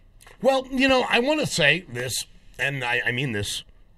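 Speech, with two loud pops at 0.89 to 0.92 s and 2.00 to 2.02 s, each a single sharp thump peaking about 5 dB above the voice. Unlike a dropout, the speech carries on underneath. The likely cause is a voltage spike from a switch, plug or static.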